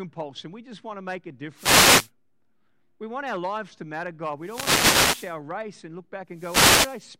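Speech recorded through an analogue wireless microphone suffers three wireless microphone noise hits, at 1.55–2.11 s, 4.40–5.39 s and 6.30–7.06 s. Each is a burst of static over the voice, where the FM radio signal faded under reflection cancellation and receiver noise rose.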